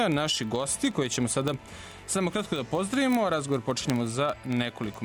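A steady train of word clock ticks runs from 0.12 s to the end, roughly fifty a second, some sharp and some faint. The receiving device is free-running rather than locked to the sender's clock, and the two differ by something like a tenth of a percent. Each time they slip, one sample is dropped or repeated. Unlike random clicks or buffer-underrun gaps, the ticks are evenly spaced and leave no audible hole.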